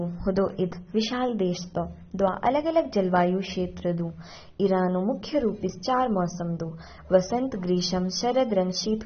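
Throughout the speech, the audio has likely passed through AAC compression at a starved bitrate, which fits roughly 24 kbps AAC-LC. The encoder discards everything above 6.3 kHz, so the voice sounds dull and smeared, with a warbling, fizzy texture on sibilants.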